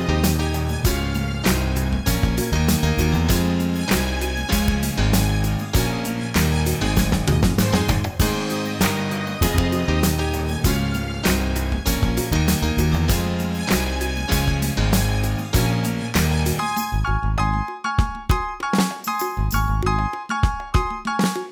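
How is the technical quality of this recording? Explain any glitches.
The recording has one recurring fault: integer overflow. It strikes at 1.50, 4.68, 12.33 and 18.31 s, and across 9.43 to 9.58 s. Loud peaks exceed the largest integer value and wrap to the opposite sign instead of being limited. Each wrap throws the waveform across its full range, giving violent, sharp cracks far harsher than clipping.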